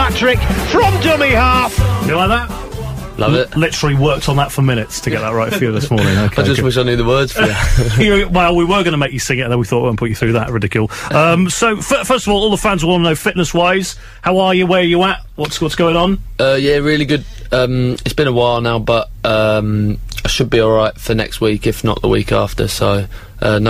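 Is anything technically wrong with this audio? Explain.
No, nothing technically wrong can be heard in this audio; the signal stays steady and intact throughout.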